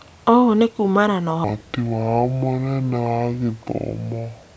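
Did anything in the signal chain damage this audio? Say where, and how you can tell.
Yes. From 1.44 s to the end, the speech drops to about two-thirds speed and falls about 7 semitones, slow and low together. This is a wrong sample rate fault at playback, consistent with 24 kHz audio clocked out at 16 kHz without conversion.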